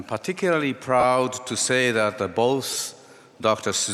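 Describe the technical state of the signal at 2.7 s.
Lost LE Audio frames from 2.71 to 2.81 s: about 60 ms dropped in short gaps, none longer than roughly 20 ms. The LC3 concealment fills each gap with a noisy, smeared texture.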